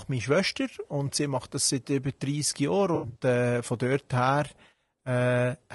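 Throughout the speech there is a rough, grainy texture, with hiss filling the gaps between harmonics and a thin, synthetic-sounding top band. This is likely low-delay AAC compression of the AAC-ELD kind, at a rate that fits roughly 32 kbps. Its short frames cannot separate the pitch harmonics cleanly, so quantisation noise spreads between them. On a spectrogram the harmonic stripes look smeared and speckled, and the upper band appears patchy and blocky instead of finely detailed.

From 2.95 to 3.19 s, just before "äh von dort", AAC frame loss with concealment produces a smeared, noisy, phasey patch. About 140 ms of audio is missing, scattered across roughly 200 ms, with the longest gap around 70 ms. That fits several lost frames. The decoder patches each gap by reusing the last good spectrum with altered phase. On a spectrogram the harmonics blur into flat noisy blocks. The waveform shows a smoothed, less detailed stretch.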